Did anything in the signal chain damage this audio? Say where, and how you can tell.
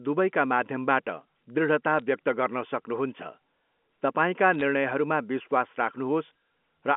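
Yes: bit errors on a digital phone line, in the network stage, around 1.99–2.02 s and 4.54–4.62 s. Flipped bits spoil single G.711 samples, giving ticks: waveform spikes, thin broadband spectrogram lines.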